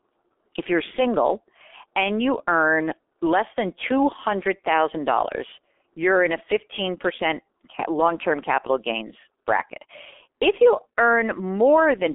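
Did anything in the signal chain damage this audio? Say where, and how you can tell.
Yes: G.723.1 codec damage runs throughout. Speech is muffled and hoarse, with nothing above 3.7 kHz and blurred consonants, which fits heavy coding at roughly 6.3 kbit/s.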